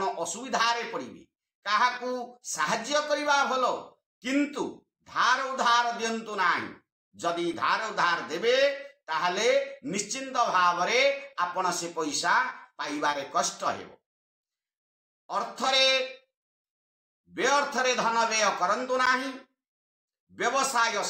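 At 7.54 s there's a block of digital silence: the output drops to zeros for about 5 ms and snaps back with no fade, so it comes across as a tick. The length fits a 256-sample buffer that didn't get filled in time.

From 13.11 to 13.15 s there's a short concealed packet loss. Roughly 20 ms of audio never arrived, and the receiver covered 14 ms of it by extending the previous sound and then blending back, which leaves a brief smear.

At 19.06 s there's a second block of digital silence, about 11 ms this time, still short enough to come across as a tick or dip rather than a hole. That length matches a 512-sample buffer.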